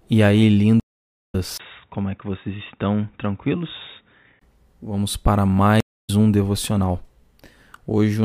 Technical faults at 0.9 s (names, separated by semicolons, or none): stream reconnect